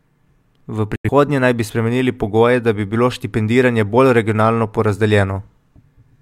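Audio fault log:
0.96–1.09 s, digital broadcast dropout: the speech snaps off almost instantly, with a fade of only about 3 ms, and comes back roughly 135 ms later further along in the programme, so nothing is heard where that audio should have been. That's the receiver muting because incoming frames were missing or failed their checks. About 85 ms of audio is simply gone, which fits a couple of lost frames, and it picks up again once clean data returns.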